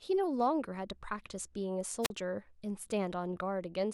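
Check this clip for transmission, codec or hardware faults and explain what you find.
One fault is present in this speech clip, a wireless microphone squelch dropout from 2.02 to 2.10 s. The analogue FM radio link from the microphone weakens for a moment, and as the received signal falls toward the noise floor the receiver's squelch closes and mutes its output for about 41 ms. The voice is cut by a short gap of near silence, edged by a brief burst of hiss as the carrier fades, before the sound returns.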